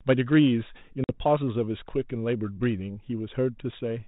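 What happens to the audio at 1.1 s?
That's packet loss on an ADPCM call, from 1.04 to 1.18 s. About 50 ms of audio, a handful of packets, drops out as a hard-edged silent gap. The decoder's predictor and step size lose sync with the sender's, so the sound comes back slightly distorted for a few tens of milliseconds before the 32 kbit/s G.726 stream settles again.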